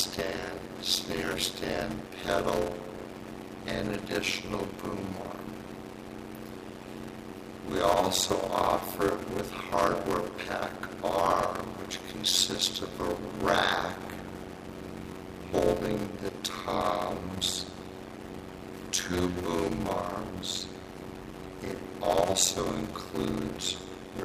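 A block size mismatch (padded) runs through the whole clip. Each block the writing stage delivers is shorter than the block the next stage reads, and the shortfall is filled with silence. The result is a steady buzz at about 91.9 Hz, the block rate, and audio stretched to 0.533 times normal speed while keeping roughly its pitch. This fits 256-sample writes into a reader expecting about 480. On a waveform, short near-silent gaps repeat every 11 ms. A spectrogram shows dense evenly spaced vertical stripes.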